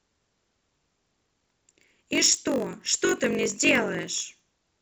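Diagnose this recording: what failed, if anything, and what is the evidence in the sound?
Block size mismatch (padded) at the buffer. A constant 46.9 Hz buzz. Speech runs at 0.938 speed, timbre unchanged. Short blocks are zero-padded into 1024-sample reads.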